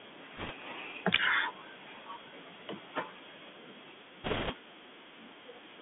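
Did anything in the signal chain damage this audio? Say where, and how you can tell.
Yes. Bluetooth CVSD headset codec, throughout: speech confined to 200 Hz–3.5 kHz, with scratchy sibilants and granular hiss, fits a 64 kbps one-bit adaptive-step coder at the codec stage.

Bit errors on a Bluetooth voice link at 0.37–0.52 s and 4.24–4.53 s: rushing crackle without loud clicks, heavier in the second burst, fits roughly 1.5% then 3% of bits flipped in transmission.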